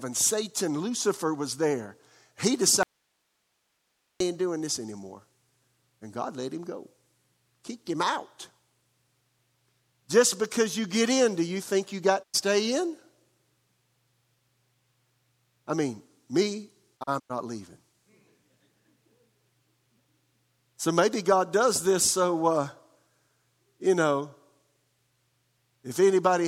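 A speech recording with two kinds of fault. From 2.83 to 4.20 s the speech drops out for about 1.37 s, returning just before "doing this anymore". Only hiss, roughly 50 dB below the speech, fills the gap. This is an audio dropout to a faint residue, likely a brief break in the signal path while the chain after it stayed live. On a waveform it shows as an abrupt collapse to a thin noise floor. A spectrogram shows a hard-edged band of faint broadband hiss with no harmonic structure.

The other two events are digital broadcast dropouts, where the receiver muted on bad or missing frames. The first comes after "you think you got", at 12.22 to 12.36 s, and silences about 96 ms. The second follows "I mean me", at 16.96 to 17.32 s, with about 160 ms lost in several short holes spread over 320 ms; its longest hole is 96 ms. Each mute fades in and out over about 20 ms, so the waveform shows short tapered gaps to silence. 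A spectrogram shows narrow, fully blank vertical stripes.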